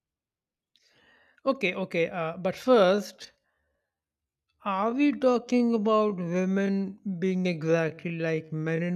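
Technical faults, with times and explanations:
2.54 s to the end: time-stretched section. Right after "okay uh but" the pace suddenly drops to about 0.67 times normal while the pitch stays put, so it drags. That's likely software stretching the audio by repeating short slices to fill time.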